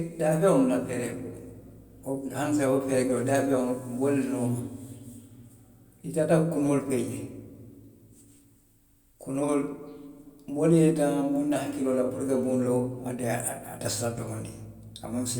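No technical faults can be heard anywhere in this recording.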